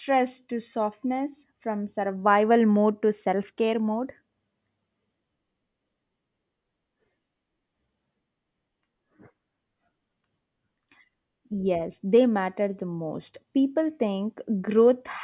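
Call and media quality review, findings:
No audible faults found on this speech recording.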